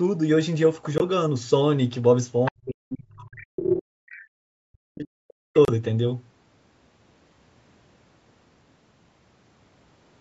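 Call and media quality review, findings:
Brief dropouts to silence at 0.98–1.02 s and 5.65–5.70 s, about 20 ms and 30 ms, audio resuming in place. Bluetooth stall: headphone buffer likely ran dry awaiting resent packets.

Second voice at 2.45–2.51 s (about 10 dB under speech) and 4.10–4.22 s (about 25 dB under). Other side's voice leaking through: echo canceller likely left loudspeaker residue.

Talker dips deeply, around 40 dB, across 2.50–4.11 s and 4.45–5.50 s. Speech suppressed in double talk: canceller likely attenuated both voices when speech overlapped.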